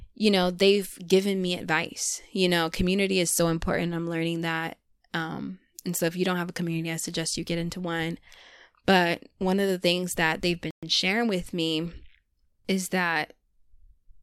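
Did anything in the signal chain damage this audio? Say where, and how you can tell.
Yes, there's a playback stall: the speech cuts to silence for 120 ms, 10.71 to 10.83 s, then resumes, likely the player starving for data briefly.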